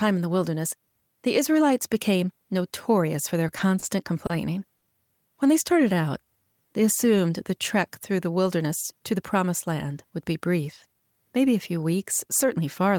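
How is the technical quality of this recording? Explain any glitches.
The recording has jitter-buffer timing faults in three places: a cluster of short stalls, a stretch of slow-down, and a stretch of speed-up.

Short stalls from a late packet occur at 3.79 to 3.84 s, 4.26 to 4.31 s and 4.77 to 4.84 s. Each time a packet arrived late, the jitter buffer ran dry, and the receiver held the last sound until the packet came in, then resumed from the same point. The first two holds last 30 ms and the third 50 ms. No audio is lost, but each stall adds its fill length to the playout delay. You hear a sound held unnaturally long, with a buzz or dip. A spectrogram shows the harmonics frozen into flat horizontal bands for those few tens of milliseconds. The waveform shows near-identical cycles repeating.

A jitter buffer slow-down runs from 5.73 to 6.54 s. To rebuild its reserve, the receiver repeated single pitch periods or fragments of pauses many times in a row, adding 69 ms in total. 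The passage plays at about 93% speed with the pitch unchanged, so sounds come out drawn out. On a spectrogram, features are stretched along the time axis while harmonic spacing stays the same. The waveform contains runs of duplicated cycles.

A jitter buffer speed-up runs from 8.57 to 9.35 s. The buffer held more audio than its target, so the receiver cut short pieces of one or a few pitch periods in a row, removing around 70 ms. Playback runs at 108% speed at the original pitch, which is fast enough to sound hurried. On a spectrogram, events are compressed in time with harmonic spacing intact. The waveform shows cycles dropped at the splice points.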